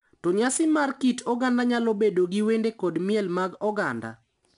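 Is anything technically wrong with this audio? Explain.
Yes. 4-bit ADPCM compression runs through the whole speech clip. Each sample is coded as a coarse 4-bit step from a prediction, so a gritty hiss rides on every loud syllable. Sharp onsets distort. Nothing sounds above about 10.6 kHz, which points to a low sample rate.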